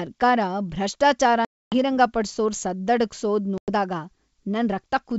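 At 1.45 s the speech drops into a hard-edged silence lasting about 270 ms, ending at 1.74 s. A second, shorter hole of about 100 ms follows from 3.58 to 3.70 s. Both are packet loss on an ADPCM call. With the packets gone, the decoder's adaptive predictor and step size lose track of the sender's. When speech resumes it comes back slightly distorted before settling within tens of milliseconds.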